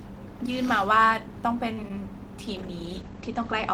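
At 1.73 to 1.79 s, a short stall from a late packet: the jitter buffer emptied and the last sound was held about 45 ms, then resumed without loss, adding 45 ms of delay. At 1.83 s and again at 1.88 to 1.90 s, short concealed packet loss: 10 ms each went missing and was patched by extending the preceding sound, heard as brief smears. From 2.48 s to the end, a call bitrate drop from 32 to 14 kbps narrows the bandwidth from 20 kHz to 8 kHz, leaving the speech muffled and coarser.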